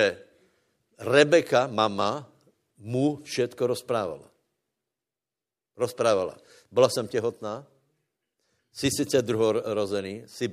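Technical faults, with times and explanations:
Nothing technical stands out here; the speech comes through with no faults to point to at any moment.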